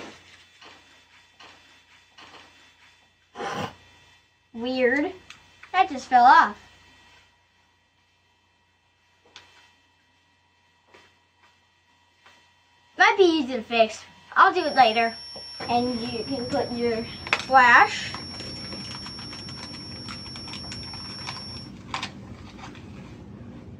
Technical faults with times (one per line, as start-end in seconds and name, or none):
14.51-21.74 feedback whistle